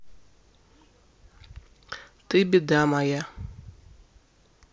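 Nothing in this bit of speech stands out as a technical fault; it just carries on steadily with no glitch, gap or jump anywhere to flag.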